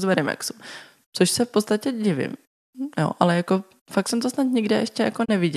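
At 5.24 s the receiver stopped getting decodable data. A frame either failed its checksum or the signal briefly vanished, so it muted the output until valid frames resumed at 5.30 s. This is a digital broadcast dropout. The speech fades down over roughly 20 ms into a short hole, and about 24 ms of what was transmitted is simply missing, which fits a single lost frame. The speech then picks up again mid-flow, with that slice gone.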